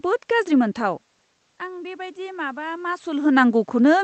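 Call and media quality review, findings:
Automatic gain rising, 1.59–3.09 s: input drops about 15 dB; AGC ramps gain about 4 dB over 1.5 s. Waveform envelope and spectrogram noise floor rise together.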